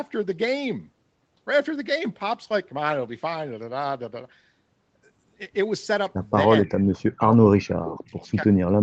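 From 6.46 s the echo canceller, likely confused by double talk with the far side's audio playing on the loudspeaker while this side spoke, treated the local talker as echo and turned it down. This speech suppressed in double talk first appears as a dip of about 15 dB that affects roughly a tenth of a second before 6.79 s. It returns much deeper, about 40 dB, from 7.06 to 7.52 s, where around 0.4 s of speech is pushed down or broken into pieces. It returns again at the same depth from 7.76 s through to the end at 8.82 s.

Overlapping and between these, an echo leak, likely from the loudspeaker side's echo canceller letting part of its microphone pickup through, sends a delayed copy of the played voice back 286 ms late. This second, trailing voice sits about 30 dB below the speech from 6.65 to 7.01 s, and about 25 dB below it from 7.56 to 7.7 s.

Throughout, the call's microphone processing trims the lowest bass, and nothing is present above 8 kHz.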